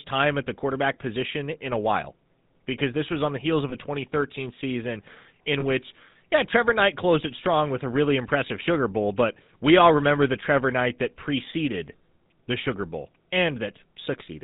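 Speech coded through the GSM full-rate codec, which fits a 13 kbps stream. Nothing above 4 kHz, plus that buzzy, gravelly roughness from the pulse-driven vocal-tract model. There are also two lost GSM frames, at 3.70–3.75 s and 5.60–5.65 s, each covering about 20 ms of audio. The decoder patches them by repeating the previous frame, leaving a brief metallic ring.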